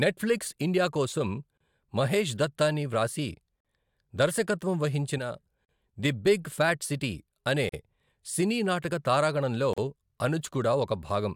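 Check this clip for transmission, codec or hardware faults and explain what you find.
Two kinds of fault are present in this speech: repeated short gaps at joins between encoded pieces, and one brief channel dropout.

Gaps at joins of encoded pieces occur at 1.57, 3.60, 5.65, 7.69 and 9.73 s, every 2.0 s, lasting 30 ms for the first and 43 ms for the rest. Each piece was encoded separately and spliced untrimmed, so encoder delay and final-frame padding leave abrupt, slightly smeared silences before the speech resumes where it stopped.

One channel drops out from 5.18 to 5.38 s. The level falls abruptly by about 6 dB and then recovers. The likely cause is one stereo channel going missing, so after mono summing, content common to both channels is halved.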